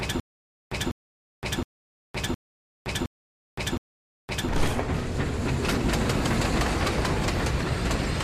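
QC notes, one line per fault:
0.00–4.49 s, stutter with silent gaps: already in progress when the clip opens, a short burst of about 0.2 s plays and then cuts to dead digital silence for about 0.52 s. The same burst returns six times at a steady 0.71 s spacing. The likely cause is a stalled player or stream that replays its last buffered fragment on each retry and then runs empty, so the audio that belonged in those gaps is missing.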